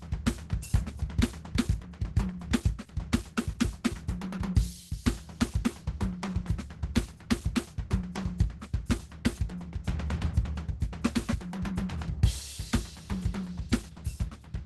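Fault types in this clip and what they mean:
Opus compression: Present throughout the music, with plainly audible codec damage. The top of the spectrum is cut back to roughly super-wideband, so the highest frequencies are missing. Tones sound muffled, hoarse and grainy rather than clean. This is likely a low-rate encode near 16 kbps, where the encoder has dropped into its hybrid speech-oriented mode and fills starved bands with noise or folded copies of lower ones instead of real detail.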